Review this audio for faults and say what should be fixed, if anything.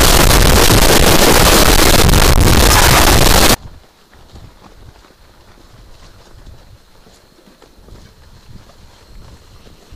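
From 0.0 to 3.54 s the audio becomes a loud, harsh roar in which quiet stretches are as loud as everything else, likely a signed and unsigned mix-up on the 8-bit samples. Flipping the top bit turns every zero crossing into a full-range jump. Ordinary clipping leaves quiet passages quiet, but this does not. Declare and verify the sample format at every read and write so 8-bit data is never interpreted with the wrong signedness.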